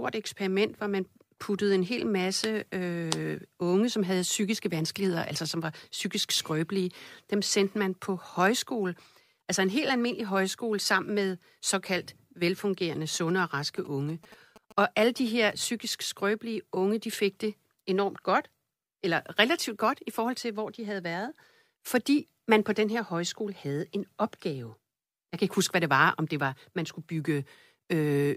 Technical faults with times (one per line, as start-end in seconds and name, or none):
13.15-15.52 GSM signalling bursts